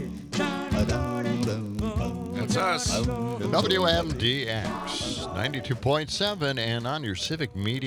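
Throughout the clip, a filter restarted on every block, dropping its stored state and starting each block from silence. This produces a 46.9 Hz buzz that rises and falls with the signal's level, which fits a 1024-sample block. A spectrogram shows evenly spaced vertical lines, and the waveform shows a small transient at each block boundary.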